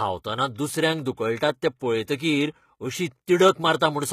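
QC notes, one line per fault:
Throughout: HE-AAC compression, likely the cause of the plainly audible damage heard across the whole speech clip. Only the lower part of the spectrum sounds genuinely coded. The treble above it is rebuilt by copying lower bands upward and shaping them with a rough envelope. That rebuilt top end is not the original sound. Its harmonics do not line up with those below the crossover. The damage points to a low bitrate of around 20 kbps.
1.79 s: pre-echo. A short hiss, about 19 ms long, comes just before a sharp attack, and the attack sounds smeared. The codec spread its quantisation noise over a whole block. That noise was sized for the loud attack late in the block. So it also filled the quiet moment before it, where nothing masks it.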